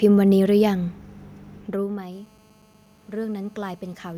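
A speech clip that picks up GSM phone buzz from 2.12 s to 4.13 s: a hard, raspy 217 Hz drone full of harmonics, about 27 dB under the voice, from a nearby phone on a call.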